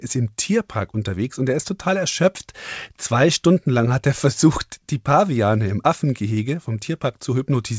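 Listening to this speech recording, which comes over a call path with its content topping out around 8 kHz, nothing stood out as a technical problem.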